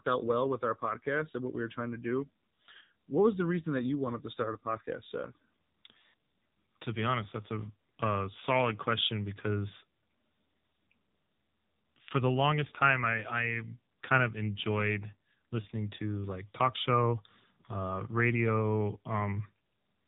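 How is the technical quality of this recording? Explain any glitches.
The recording is heavily degraded by AMR narrowband mobile codec processing, present from start to finish. The speech is band-limited with nothing above 3.8 kHz, so it sounds muffled. Because AMR-NB rebuilds speech from a vocal-tract model excited by sparse pulses, the low bit budget makes it buzzy and synthetic, which fits a 6.7 kbps mode.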